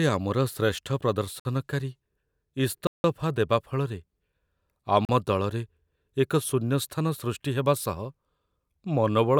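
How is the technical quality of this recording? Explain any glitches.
Three blocks of digital silence interrupt the speech, at 1.40 to 1.45 s (54 ms), 2.87 to 3.04 s (171 ms, which fits an 8192-sample block), and 5.05 to 5.09 s (39 ms). Each time, the processing likely failed to supply samples and zeros were written instead. The audio drops straight to silence and returns with no fade. The two shorter gaps sound like brief holes. The middle one is a longer dropout.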